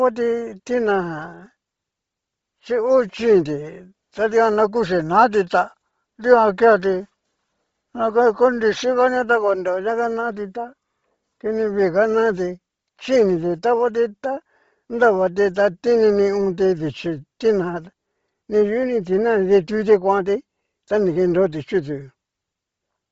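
From start to finish, the speech carries a breathy, grainy fizz in its upper range, with nothing at all above 7.7 kHz. The cause is likely Bluetooth LC3 compression, heavily damaging, which fits roughly 24 kbps with 7.5 ms frames: high detail is discarded and replaced with noise fill.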